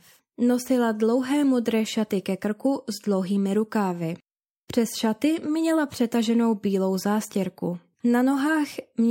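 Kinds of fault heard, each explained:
No technical faults detected on this speech recording.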